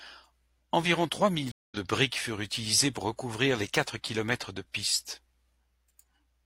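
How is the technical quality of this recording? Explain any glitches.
There's one real glitch in this speech clip: a stream reconnect between 1.52 and 1.77 s. The connection dropped, playback went quiet for about 0.2 s, then a fresh decoder picked the live stream back up mid-flow. Because the stream kept moving while it was down, the audio resumes at a later point, roughly 150 ms of speech skipped, right at "de briques furent utilisées". So you hear a short dead gap and a jump in the talking, not a smooth pause.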